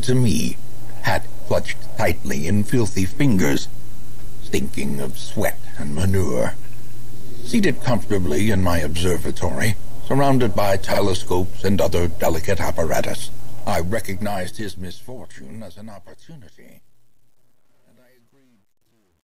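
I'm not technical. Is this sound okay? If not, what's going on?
No. At 4.90 s and again at 10.95 s there's a brief stutter where about 50 ms of sound plays twice. These are overlapping chunks: the audio was handled in 6-second pieces that overlap at each join. Unlike a dropout, nothing goes missing; a sliver repeats instead.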